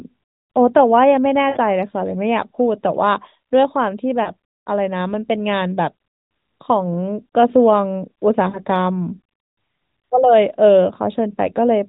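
Lost AMR speech frames occur three times in this narrowband mobile speech, whose band tops out at 4 kHz. From 1.50 to 1.57 s the decoder conceals a gap of about 60 ms, consistent with three missing 20 ms frames. It repeats the last good pitch and vocal tract settings at falling gain, so the sound smears and sags. Shorter losses at 4.24 to 4.30 s and 8.50 to 8.65 s, each consistent with one missing frame, give a brief dip or warble.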